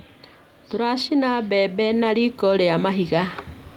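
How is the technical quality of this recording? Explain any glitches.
There is one fault: automatic gain rising. From 0.71 s to 3.39 s the automatic gain control judges the input too quiet and steadily raises its gain by about 7 dB. The voice and the background noise swell together across those 2.7 seconds, so the level creeps upward rather than stepping.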